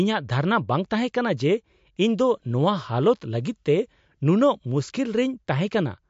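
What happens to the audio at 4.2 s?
At 4.2 s the speech sounds watery and swirly, with nothing above 7.6 kHz, as it does throughout. The likely cause is MP3 compression at a bitrate near 52 kbps, where the encoder cuts the treble and switches weak frequency lines on and off between frames.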